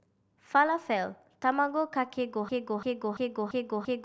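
At 2.49 s the speech turns into a broken-record loop: a 341 ms fragment repeats exactly, back to back, five times through to the end, likely from a stalled player or stream resending its last buffer. The speech that belonged there is lost. A spectrogram shows one identical block tiled end to end.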